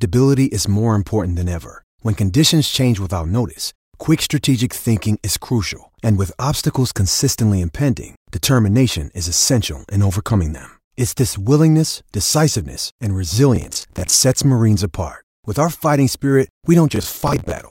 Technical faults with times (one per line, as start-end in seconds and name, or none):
13.56-14.13 processor overload crackle
16.92-17.59 processor overload crackle